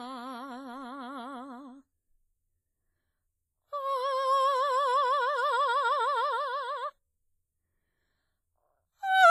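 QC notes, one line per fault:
Throughout: WMA compression, likely; the music rings and smears with signal-dependent hiss, heavy damage fitting about 24 kbps, nothing above 15.4 kHz.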